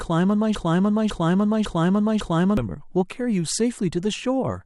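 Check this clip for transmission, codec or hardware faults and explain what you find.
One fault is present. From 0.55 to 2.57 s, a broken-record loop replays one 0.55 s fragment four times back to back, likely a stalled stream resending its last buffer. The repeats are identical rather than fading like an echo, and the speech that should have played is lost.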